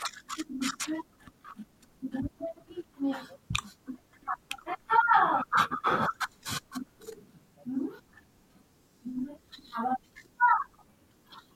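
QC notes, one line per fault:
No faults found on this speech clip.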